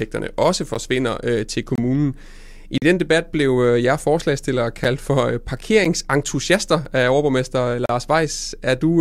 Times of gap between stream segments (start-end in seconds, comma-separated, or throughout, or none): 0.74, 1.75-1.78, 2.78-2.82, 4.84, 5.84, 6.85, 7.86-7.89